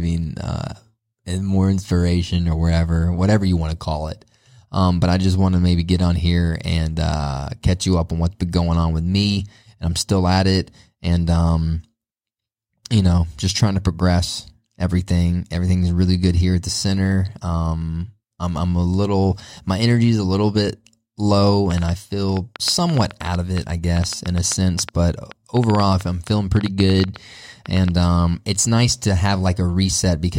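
A train of clicks, 21.71 to 27.89 s, overlays the speech: roughly forty irregular ticks, 6.6 per second, about 10 dB louder, likely electrical interference.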